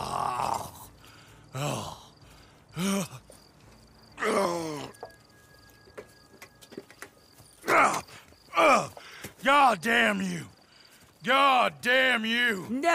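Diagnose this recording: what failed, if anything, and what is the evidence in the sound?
Nothing failed: no stage in the chain, from wiring and conversion through buffering, processing, transport and playback, leaves an audible fault anywhere in the recording.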